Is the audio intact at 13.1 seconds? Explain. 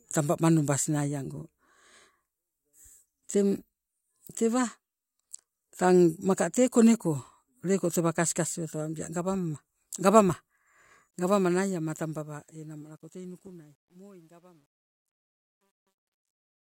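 No, 13.1 seconds sits right where the truncation distortion on this speech's fade-out is at its worst, from 13.03 to 16.75 s (it starts at 11.11 s). The fade stage drops low bits undithered, which fits a roughly 11-bit path, so the quiet tail turns gritty.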